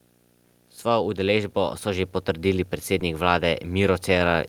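A speech clip with three technical faults. Video or display buzz runs from start to finish. A screen or video cable is coupling into the audio path. It shows up as a low buzz at 60 Hz, the picture's field rate, with a thin hash of higher components riding on it. The level is low, roughly 35 dB below the speech. It still sits under every pause. It does not come and go. That steadiness marks it as electrical pickup rather than anything in the room.

Automatic gain rising begins at 0.83 s and continues to the end. The gain control judged the input too quiet and kept turning it up. Everything swells together. The speech gets louder, and so does the background. The rise is gradual, spread over several seconds rather than a sudden step. Because the background grows along with the speech, it is clear the change is gain, not the talker speaking up.

A short concealed packet loss occurs from 2.99 to 3.01 s. 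About 10 ms of audio failed to arrive in time. The receiver covered the gap by carrying the previous sound forward for about 10 ms, then blended back into the real signal. The result is a brief smear, a tiny wobble in the speech, rather than a clean dropout.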